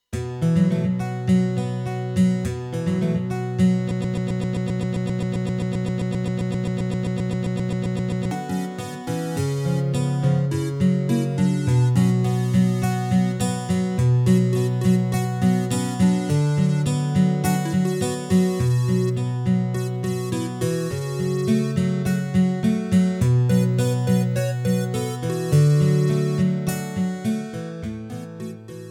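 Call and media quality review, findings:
Broken-record loop, 3.91 to 8.31 s: a 0.13 s fragment repeats back to back 33 times, identical each pass, giving a stuttering mechanical rhythm. Likely cause: player, encoder or stream stalled and kept re-sending its last held buffer. The audio due in that 4.4 s window is lost, not delayed; playback resumes at 8.31 s with that stretch missing.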